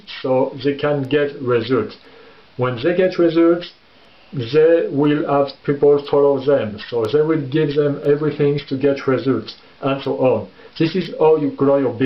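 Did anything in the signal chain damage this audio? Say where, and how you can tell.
No, nothing in the signal chain damaged this audio.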